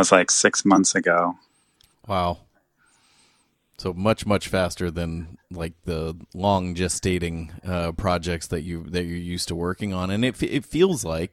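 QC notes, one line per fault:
0.75–0.78 s, corrupt frame decoded: Right after "like six", a loud glitch cuts through the speech, peaking around -5 dBFS. A single compressed frame arrived with flipped bits and was decoded anyway. Its misread codes and gains put energy at the wrong frequencies for that frame's length.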